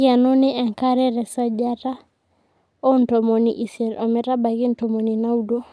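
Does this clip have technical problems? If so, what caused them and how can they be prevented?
No, no technical problems can be heard here.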